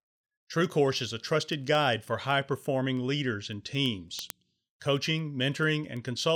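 From about 0.2 s right through to 6.3 s, the speech carries word clock ticks: sharp little clicks at a steady rate of roughly ten a second, around fifty in all, some louder than others. What's happening is a digital link being read by a device on its own free-running clock, off from the sender's by something like 200 ppm. Every time the two clocks slip past each other, a single sample gets dropped or repeated, and that's the tick you hear.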